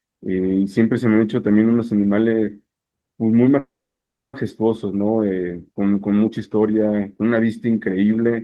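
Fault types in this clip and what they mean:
Call audio freeze: The speech stops at 3.59 s and resumes at 4.35 s. The last sound trails on briefly as a fading buzz or hiss, then about 0.64 s of silence follows. This likely happened because packets were held up in transit and the jitter buffer ran dry, so the receiver padded the wait. When the speech returns, it picks up exactly where it stopped. Nothing is lost, but everything after it arrives about 0.74 s later.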